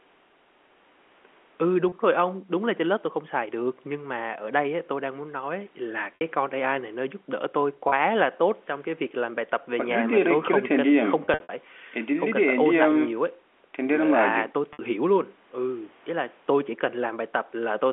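At 1.89 s and 7.89 s, 30 ms of speech drops out and is bridged by packet loss with pitch repetition. The receiver loops the last pitch period, producing a brief held, buzzy tone. At 6.15 s and 14.73 s the gaps are 60 ms, long enough for the loop to fade toward silence before a short cross-fade. From 11.25 to 11.49 s, 150 ms is lost in scattered bursts of up to 60 ms, giving a stuttering string of buzzes within the 250 Hz to 3.4 kHz G.711 line band.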